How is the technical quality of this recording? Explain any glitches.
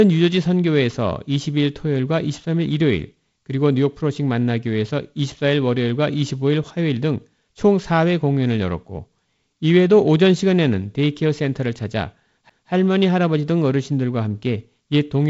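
One glitch stands out in the speech, a CD skip at 12.50 s. A knock or a flaw on the disc sent the laser tracking to a neighbouring turn of the spiral, so the player muted for a few milliseconds and resumed from a different point on the track. You hear a short tick followed by an abrupt jump in the audio, forward or back, by a span that fits a whole number of disc rotations. The clip also carries G.722 wideband telephone coding: nothing is present above about 7.7 kHz, and the light hiss in the upper band and slight graininess lower down fit the 48 kbit/s mode.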